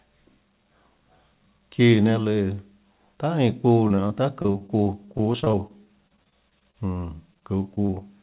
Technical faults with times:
3.88-6.98 repeated packet loss (robotic sound)
7.34-8.03 repeated packet loss (robotic sound)

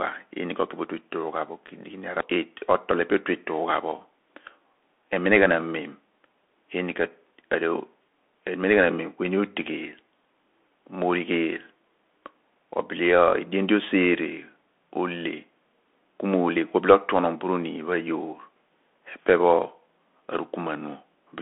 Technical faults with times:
0.00-21.41 Bluetooth CVSD headset codec

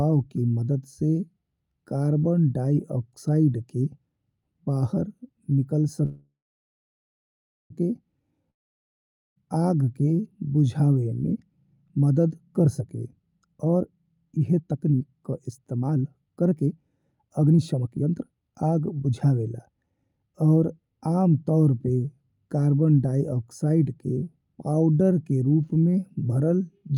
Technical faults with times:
6.05-7.72 call audio freeze
8.50-9.38 long network dropout
12.35-16.77 jitter buffer speed-up
17.26-19.60 jitter buffer speed-up

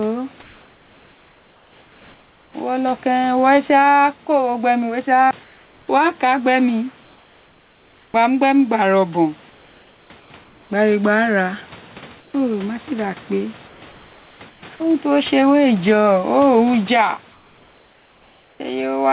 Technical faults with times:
0.00-19.13 gain pumping
0.42-2.54 comfort noise in place of the background
5.44-8.14 comfort noise in place of the background
8.12-8.14 onset clipped by the voice detector
9.50-10.70 comfort noise in place of the background
12.20-12.34 comfort noise in place of the background
13.68-14.80 comfort noise in place of the background
14.76-14.80 sound dropped by the voice detector
17.32-18.60 comfort noise in place of the background

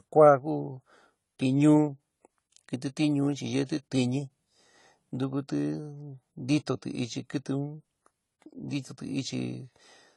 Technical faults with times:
0.00-10.17 AAC compression

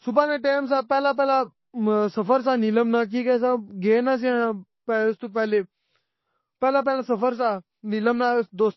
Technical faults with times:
0.00-8.77 MP3 compression

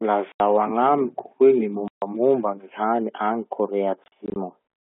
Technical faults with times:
0.32-0.40 packet loss filled with silence
1.88-2.02 packet loss filled with silence
4.04-4.36 packet loss filled with silence

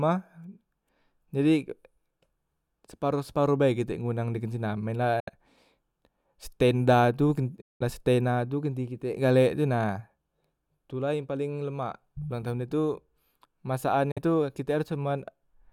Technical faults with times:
5.20-5.29 Bluetooth dropout
7.61-7.82 Bluetooth dropout
14.11-14.19 Bluetooth dropout

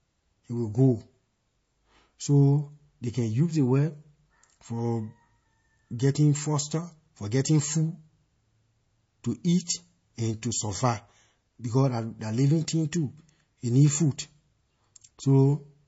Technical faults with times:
0.00-15.87 low-bitrate audio saved at a high bitrate

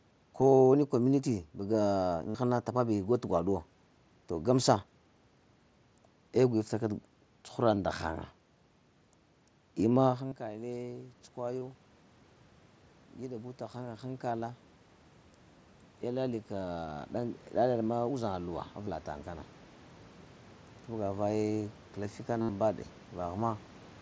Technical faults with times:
2.29-2.35 concealed Bluetooth headset packet loss
7.75 concealed Bluetooth headset packet loss
10.27-10.32 concealed Bluetooth headset packet loss
11.59-11.62 concealed Bluetooth headset packet loss
13.20-14.65 automatic gain rising
16.02-19.54 automatic gain rising
18.85 concealed Bluetooth headset packet loss
22.41-22.49 concealed Bluetooth headset packet loss

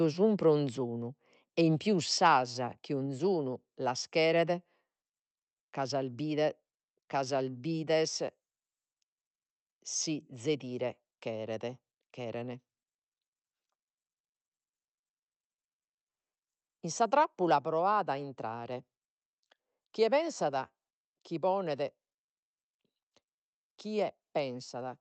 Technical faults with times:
2.04 microphone volume stepped down
2.25-2.28 microphone overload

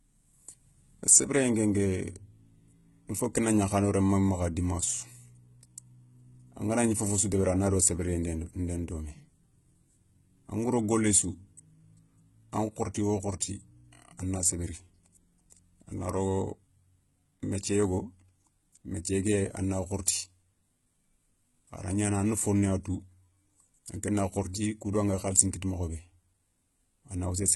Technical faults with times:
0.00-27.55 HE-AAC compression

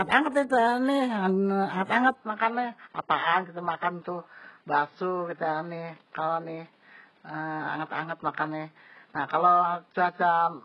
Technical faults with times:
0.00-10.64 HE-AAC compression
2.13-10.64 input switched to a poorer device

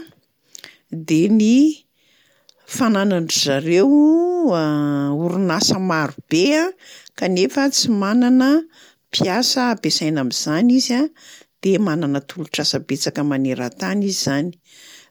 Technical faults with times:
none

